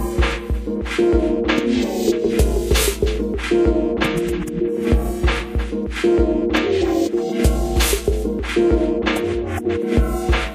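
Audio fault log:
No fault is logged for this audio.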